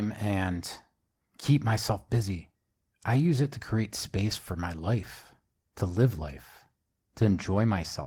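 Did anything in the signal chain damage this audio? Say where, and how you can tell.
No, nothing audible points to damage at any stage of the chain in this speech recording.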